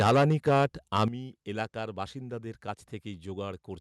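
From 0.00 to 0.66 s the microphone input was likely set too high, driving peaks about 9 dB past the converter's limit. This microphone overload flattens the tops of roughly 15% of the samples and gives the loudest syllables a harsh, crackling edge. At 0.07 s the call software likely lowered the microphone volume in one step, so voice and background drop together by about 3 dB. The overload returns from 0.95 to 1.05 s, likely because the input was still too hot, pushing peaks about 5 dB over. Fewer samples are cut off this time, but the same gritty crackle is there. At 1.08 s a second microphone volume step down, likely the software reacting to that burst, drops the whole level by about 10 dB, a sudden dip.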